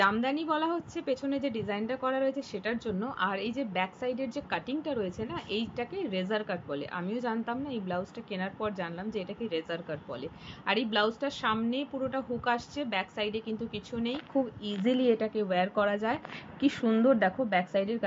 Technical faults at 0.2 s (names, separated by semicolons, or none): none